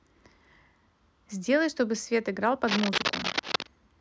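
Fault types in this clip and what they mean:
Cable scratch noise: from about 2.67 to 3.69 s, roughly a second of harsh, irregular scratching and crackle rides over the speech, only a little quieter than the speech itself, most likely from a worn cable or connector being moved so its contact resistance flickered. On a spectrogram it shows as dense, broadband vertical smears clustered in that span; the waveform carries jagged, uneven bursts stacked on top of the speech envelope.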